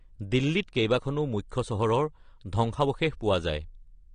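Throughout the speech, the signal was likely passed through AAC compression at a low bitrate, which fits AAC-LC at 32 kbps. Nothing remains above 9.7 kHz, so the speech sounds dull, and sibilants and sustained sounds take on a warbling, fizzy smear.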